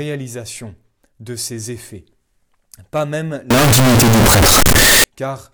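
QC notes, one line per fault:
3.51–5.04 s, signed and unsigned mixed up: right after "pas même" the speech becomes a loud, harsh roar with quiet moments as loud as the rest, likely 16-bit samples read with the wrong sign convention, flipping the top bit so each zero crossing jumps full scale. Unlike clipping, even quiet passages turn loud.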